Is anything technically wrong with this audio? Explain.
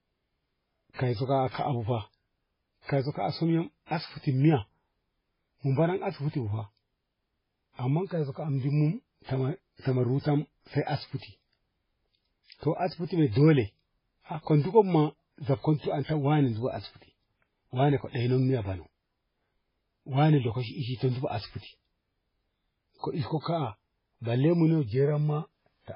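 Yes. Throughout the clip the speech sounds watery and swirly, with nothing above 5.3 kHz. This is likely heavy MP3 compression at a very low bitrate, around 16 kbps. Starved of bits, the encoder cuts the treble and drops weak frequency components that flicker between frames.

Pre-echo appears at 0.94 to 0.99 s, 2.83 to 2.89 s and 3.86 to 3.91 s, spreading 46 to 58 ms ahead of sharp attacks. Quantisation noise spread across each transform block fills the quiet gap before the onset, so a brief hiss leads each attack and softens it.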